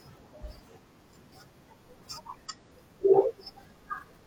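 A speech recording with an abrupt jump forward at 2.45 to 2.51 s, where the audio cuts off and resumes further on with a brief blip at the join. The likely cause is a stream segment skipped: one chunk failed to load and playback continued from the next.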